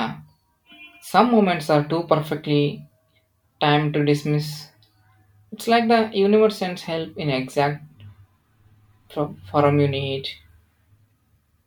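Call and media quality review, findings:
No faults found: the speech signal holds steady throughout, with no audible dropouts, distortion, level problems or timing errors.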